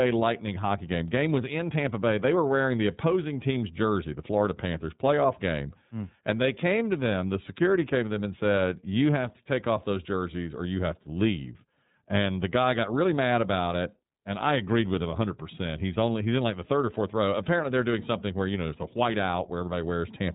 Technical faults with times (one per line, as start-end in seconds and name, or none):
0.00-20.35 iLBC codec